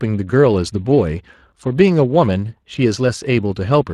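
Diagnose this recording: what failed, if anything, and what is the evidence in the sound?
Codec stage: Speex codec damage runs the whole clip, with a hoarse, grainy edge on the speech because the CELP excitation is starved, which fits roughly 22 kbps.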